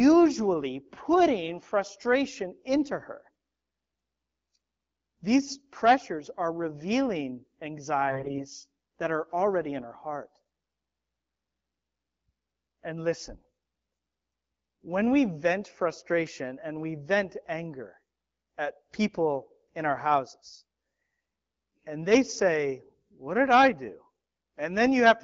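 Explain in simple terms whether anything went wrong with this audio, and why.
Something did go wrong, for about a third of a second from 8.08 to 8.41 s, just before "that are already in". The voice turns hoarse, scratchy and gargly there. These are AMR bit errors: a weak link flipped a fair share of the less protected bits in each speech frame, so the phone's voice model got wrong instructions. Unlike a dropout, the sound never cuts out, and pitch and loudness stay roughly steady.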